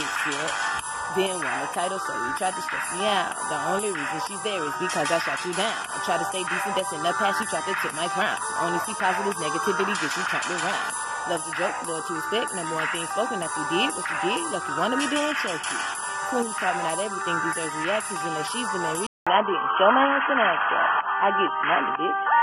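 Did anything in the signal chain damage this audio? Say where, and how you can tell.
Yes. At the input, the input likely switched to a poorer device at 19.07 s. A 200 ms gap follows. Then nothing above 3.2 kHz, a different level, and new background noise.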